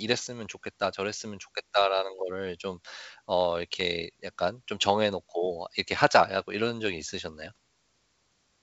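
Nothing technically wrong can be heard in this speech recording. It has gone through G.722 wideband telephone coding at 64 kbit/s, which carries the sound up to about 7 kHz, and any trace the coding leaves is faint at most.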